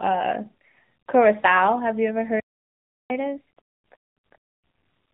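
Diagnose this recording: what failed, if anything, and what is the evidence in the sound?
The voice sounds muffled and buzzy for the whole clip, with nothing above 4 kHz and a synthetic, reedy edge. This is the codec stage: AMR narrowband mobile coding, whose pulse-driven vocal-tract model fits a low mode near 7.4 kbps.

At 2.40 s the speech cuts out mid-flow and stays silent for about 0.7 s, resuming at 3.10 s. At the playback stage, this is likely a playback stall: the player's buffer ran dry or its thread was blocked.

From 3.10 s to the end the speech runs noticeably fast and raised by about two semitones, at 1.15 times normal speed. This is catch-up at higher speed during playback: the player resamples its queued backlog to recover the time lost in the gap.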